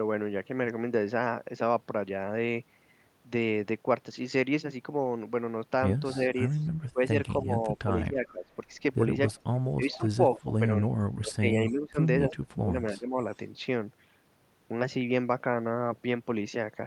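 From 6.14 to 8.5 s and again from 9.3 to 13.18 s, the speech dips in pieces, about 15 dB and then about 25 dB at worst. This is speech suppressed in double talk, likely from an echo canceller attenuating the near talker while both sides speak. Echo leak appears at 6.59, 9.28, 9.91 to 10.4, 11.69, 12.3 and 13.31 s as a repeat 271 ms behind the speech, between about 40 and 15 dB down. This is likely residual loudspeaker pickup the canceller failed to remove.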